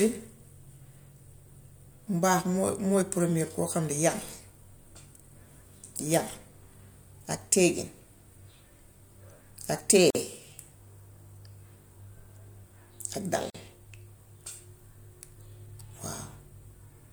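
Speech clip with two gaps at joins of encoded pieces, at 10.10 s (about 46 ms) and 13.50 s (about 44 ms), where untrimmed encoder delay and padding leave short silences.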